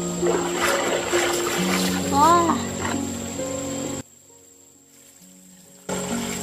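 One channel inverted, from 4.01 s to 5.89 s: the sound suddenly drops by about 22 dB, as if most of its body has been pulled out, before returning at full strength. The likely cause is a polarity flip on one stereo channel, so when the two sides are summed to mono, everything common to both cancels, leaving only the faint difference between left and right.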